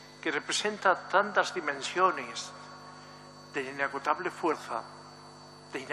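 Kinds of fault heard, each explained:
Compressed frames skipped: at 1.85 s and 4.52 s the audio jumps ahead by about 50 ms, roughly two 23.2 ms frames lost or rejected by the decoder.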